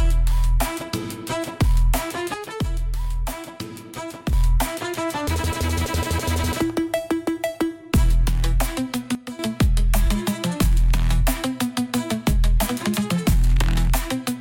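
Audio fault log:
2.34–4.33 s and 9.15–9.39 s, sudden gain jump: the level drops abruptly by about 6 dB in the first span and about 10 dB in the second, then returns just as suddenly at each end. The sound and its background noise fall and recover together, with no fade in or out. A digital gain change applied between consecutive samples without a ramp, such as a level setting or bit shift, is the likely cause.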